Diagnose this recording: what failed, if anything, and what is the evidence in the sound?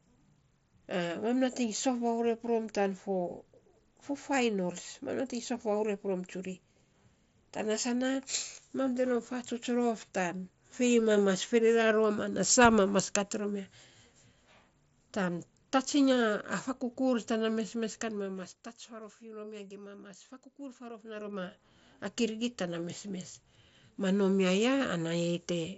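Zipper noise at 20.99 to 21.68 s, in the driver or buffer stage: the level moves by roughly 15 dB in 2 dB steps, about ten a second, each step leaving a small click. The gain is applied once per buffer without smoothing, so a ticking rides on the speech.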